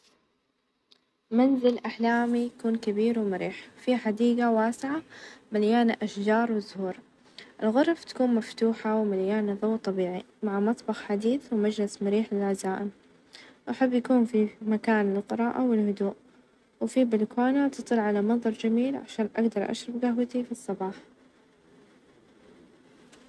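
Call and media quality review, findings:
No audible faults found.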